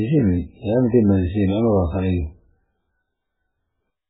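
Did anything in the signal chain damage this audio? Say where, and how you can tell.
Yes. MP3 compression damage at the codec stage, present throughout the speech. Nothing survives above 3.8 kHz, a hard ceiling where the encoder, starved of bits, simply dropped the treble, and the remaining band has a heavy watery, swirling texture as weak frequency lines flicker on and off between frames. Consonant attacks smear rather than snap. Damage this severe points to a very low bitrate, likely around 8 kbps.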